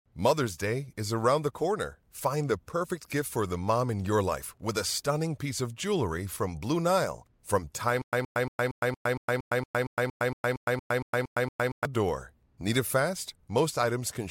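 The playback was likely stalling repeatedly: from 8.02 s to 11.85 s the stream kept retrying, replaying its last fragment each time and then running dry. This produces a stutter with silent gaps. A 122 ms scrap of speech repeats sixteen times, each followed by about 110 ms of dead digital silence, giving an even 231 ms rhythm. The speech that should have filled those four seconds never arrives.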